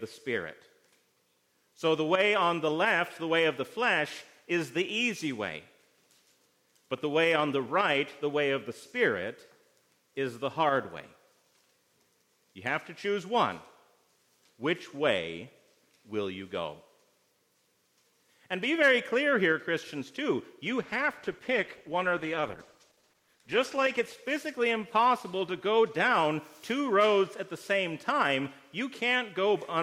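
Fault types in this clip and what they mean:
call bitrate drop: from 20.83 to 27.23 s, coarser coding consistent with 128 falling to 13 kbps muffles the sound; the spectrogram's upper band vanishes.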